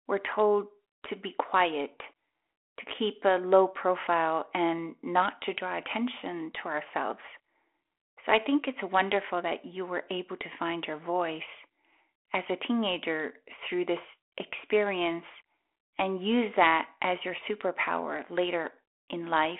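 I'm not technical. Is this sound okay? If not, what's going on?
Yes, it's fine: nothing is going wrong here, and it simply has the slightly narrow, muffled-at-the-top sound of an ordinary phone line, which is how a call over that kind of connection is supposed to sound.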